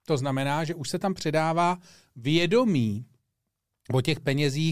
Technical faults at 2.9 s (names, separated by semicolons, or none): none